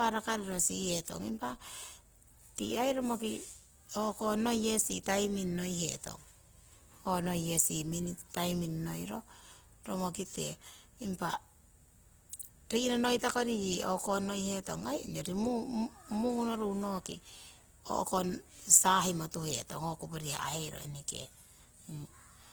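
Throughout, the speech sounds rough and grainy, with noisy tones. This is likely Opus compression in its music mode, fitting a low bitrate near 16 kbps. At 12.39 s there is pre-echo. A sharp attack arrives with a brief hiss about 16 ms ahead of it, because the codec spread its noise across the whole block.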